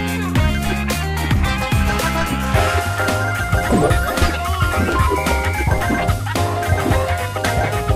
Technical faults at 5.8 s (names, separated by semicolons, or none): DC step